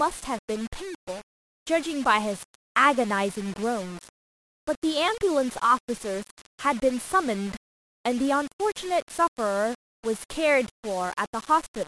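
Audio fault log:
throughout: low bit depth without dither. The speech sounds grainy, with distortion tracking each syllable and quiet tails sputtering into silence, likely from rounding to 6 bits, leaving error about 20 dB below the signal. The waveform shows staircase steps, and the spectrogram shows broadband hash only where speech is.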